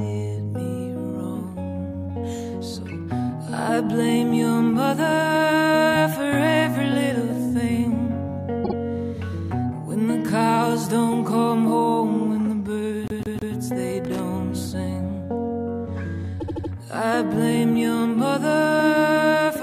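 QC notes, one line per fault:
8.64–8.74 s, 13.08–13.55 s, 16.39–16.71 s, repeated frames: a short stretch of the coded stream is played again and again, producing a stutter. At 8.64 s a 52 ms block sounds two extra times, adding 0.1 s. At 13.08 s a 157 ms block repeats three times, adding 0.47 s. At 16.39 s a 78 ms block repeats four times, adding 0.31 s.
14.05–14.20 s, loose connector crackle: a brief, irregular burst of scratchy crackle lasting about 0.15 s. It sounds like a worn or dirty contact rapidly making and breaking, chopping the signal on and off. Any DC sitting on the line adds pops at the breaks. The irregular making and breaking gives the burst its rough, uneven texture rather than a clean dropout or a single click.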